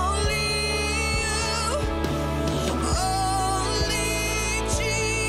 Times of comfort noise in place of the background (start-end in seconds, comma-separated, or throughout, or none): none